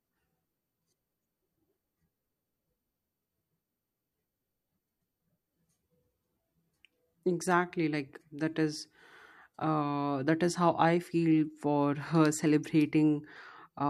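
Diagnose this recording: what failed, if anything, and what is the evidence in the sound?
No faults detected.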